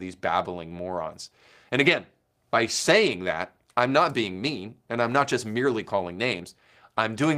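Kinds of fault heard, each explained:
Lost packet rebuilt from error correction: a brief rough, noisy patch at 3.05–3.07 s, with no gap, where about 20 ms was likely rebuilt from a low-bitrate copy.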